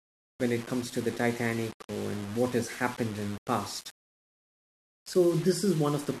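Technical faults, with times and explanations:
Throughout: low bit depth without dither. The speech carries a grainy, rasping distortion that tracks the voice, harshest on quiet syllables and decay tails, with the softest passages breaking up or sputtering between steps. The likely cause is rounding to very few levels with no dither, which fits roughly 5-bit resolution. The error follows the signal instead of forming steady hiss; it sits only about 20 dB below the speech and changes character with it.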